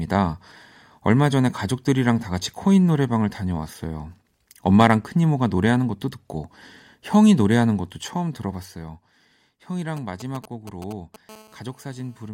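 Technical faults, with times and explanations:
9.97 to 11.30 s: GSM signalling bursts. A galloping dit-dit-dit of short buzzes sits under the speech at roughly 10 dB below it. A nearby 2G phone is transmitting only brief groups of radio pulses at a 216.7 Hz rate while it signals to the network, and the audio circuitry rectifies them into sound. The broken, clustered rhythm is what separates this from the continuous buzz of a call in progress.
11.30 to 12.29 s: GSM phone buzz. The galloping bursts give way to a hard, raspy, unbroken buzz at 216.7 Hz, about 20 dB below the speech, packed with harmonics and unrelated to anything being said. The phone has moved into a call and now transmits its pulses 216.7 times a second without pause, so the rectified interference becomes a steady tone. Its constancy marks the difference from the gappy signalling pattern just before it.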